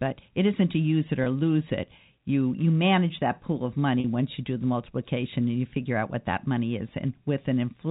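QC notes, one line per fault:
1.24–1.26 s and 4.00–4.04 s, packet loss with pitch repetition: a brief buzzy, held tone after "isn't to use it" and "manage that pool of", where 20 ms and 40 ms of audio were lost and the last pitch period was repeated to fill each gap.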